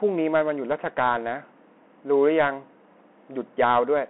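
Bluetooth CVSD headset codec damage runs through this entire speech clip, squeezing it into a telephone band of roughly 250 Hz to 3.4 kHz. The one-bit delta coding, consistent with a 64 kbps stream, leaves plainly audible grainy noise, and its adaptive step lags fast transients, roughening sibilants.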